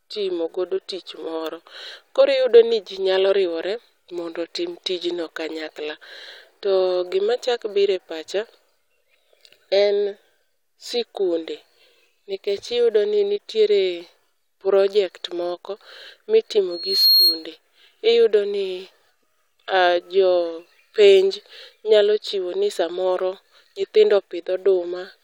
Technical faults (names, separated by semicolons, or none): loudspeaker feedback squeal